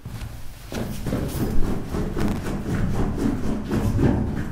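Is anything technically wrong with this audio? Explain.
Yes. From 2.19 to 2.49 s there is processor overload crackle. Repeated missed deadlines replay old audio in very short buffers, about twenty of them, causing a gritty tearing burst.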